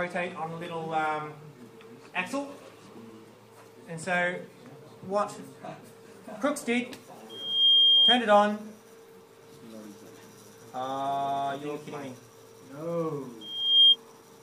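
A piercing 3.2 kHz tone swells over about 0.4 s to roughly 15 dB above the audio at 7.29–8.25 s and 13.41–13.96 s: loudspeaker feedback squeal, a microphone re-amplifying its own speaker.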